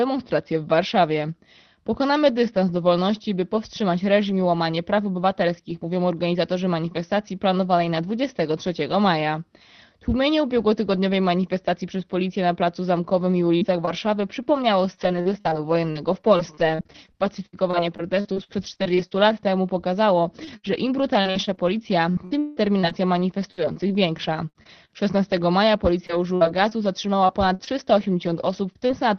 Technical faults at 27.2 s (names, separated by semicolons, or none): repeated packet loss (robotic sound)